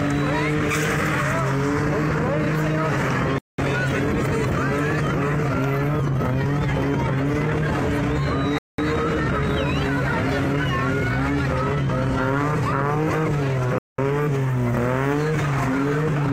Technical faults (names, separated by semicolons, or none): gap between chunks